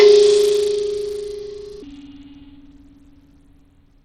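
A music clip with plainly audible Bluetooth SBC compression throughout: thin, flickering treble and gritty, aliased noise, likely from SBC at a very low bitrate, consistent with about 80 kbps. From 1.82 s to the end, a section at the wrong speed plays at 0.688 times normal, dropping pitch by roughly seven semitones, likely from playback against a mismatched clock.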